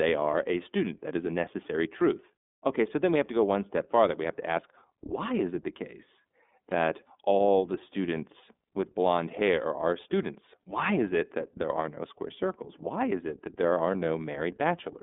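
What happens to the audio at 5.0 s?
At 5.0 s the speech is passing through the iLBC codec, as it does for the whole clip. Each 30 ms frame's excitation is coded on its own, and the roughness suggests the 13.33 kbps mode. The sound is clearly narrowband and plainly rough and synthetic. A spectrogram shows energy confined to about 200 Hz to 3.6 kHz, with nothing above 3.7 kHz.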